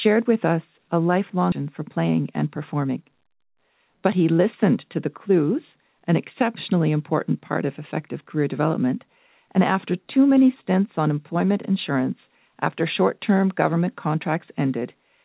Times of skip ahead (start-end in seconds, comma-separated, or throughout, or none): 1.52-1.54